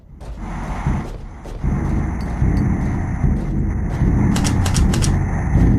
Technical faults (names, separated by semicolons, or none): none